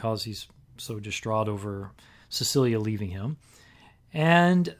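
Nothing goes wrong anywhere in this short bit of speech, so there's no technical fault to point to.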